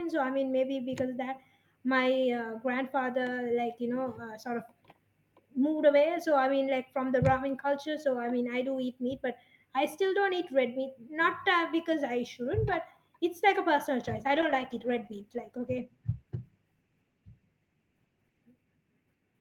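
From 14.05 s to 18.49 s, a call bitrate drop leaves the speech coarse and watery for about 4.4 s, consistent with the encoder falling from roughly 48 to 18 kbps. A spectrogram shows the upper band thinning and blotchy until it fills back in.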